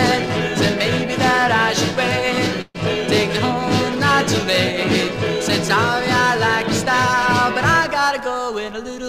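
A call audio freeze runs from 2.61 to 2.77 s: the sound stretches into a fading continuation of about 131 ms, ending in 20 ms of silence, before resuming where it stopped with nothing lost. The likely cause is delayed packets draining the jitter buffer, adding 131 ms of delay.

A jitter buffer speed-up follows from 8.47 to 9.06 s, where the audio plays at 106% speed without any pitch change. The receiver trims repeated short pitch-period slices, about 40 ms in total, to shrink the backlog, which leaves this stretch sounding slightly rushed.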